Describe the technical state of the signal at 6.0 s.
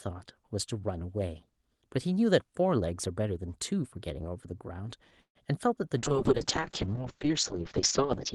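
A call bitrate drop starts at 5.98 s and runs to 8.34 s. The Opus encoder is starved of bits, which fits a fall from roughly 32 to 6 kbps, so it codes coarsely and narrows the band from 12 kHz to 8 kHz. The speech turns rough and muffled.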